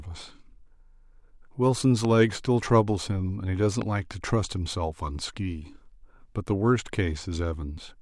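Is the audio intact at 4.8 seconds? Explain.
Yes, at 4.8 seconds the speech plays through intact, with no dropout, click, distortion or other audible fault at that moment.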